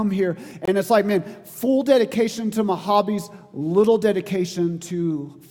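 A gap between stream segments opens at 0.65 s and lasts until 0.68 s. The timestamps of two consecutive segments fail to meet, leaving about 23 ms that no segment covers, and the player fills that span with silence. It is heard as a brief, hard-edged dropout, a clean hole with abrupt cut-off and restart. No audio is missing; the material after the hole simply arrives 22.6 ms later than it should.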